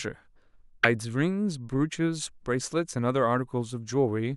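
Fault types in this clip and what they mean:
Broken MP3 bit reservoir: the speech jumps abruptly at 0.82 s, and the sound is disrupted until 0.85 s before normal sound returns. That disturbance lasts about 28 ms, close to the 26.1 ms length of one MP3 frame. The likely cause is that frames were lost from the stream, so the next frame reached back into the shared reservoir for its data, decoded bytes from a different frame, and produced a momentary glitch.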